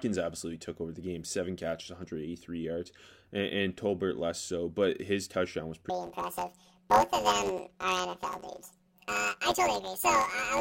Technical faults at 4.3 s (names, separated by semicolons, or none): none